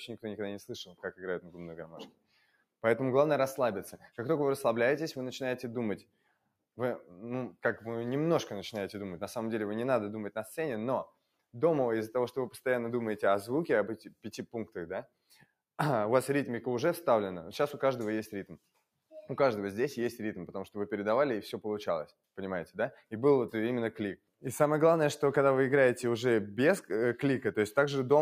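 Throughout, a speech-oriented noise suppressor is working on material that isn't speech, treating steady tones and decaying tails as noise. Level swings by a few decibels as attacks pass and sustained parts sink, giving a pumping, thinning quality rather than the clean on-off of a gate. The same suppressor cuts sound harder at 0.88–2.83 s, 6.02–7.11 s, 11.06–11.54 s, 13.97–15.46 s, 22.06–23.12 s and 24.17–24.44 s, with drops of about 18 to 19 dB. Held and fading sound collapses while transients survive, which distinguishes these cuts from a dropout, where everything vanishes together.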